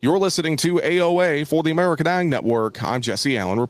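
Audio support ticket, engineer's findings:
Gain pumping throughout speech. Gain swing around 5 dB. Level range squashed. Likely cause: input gain set too high, fast limiter/compressor clamping on peaks, releasing in gaps.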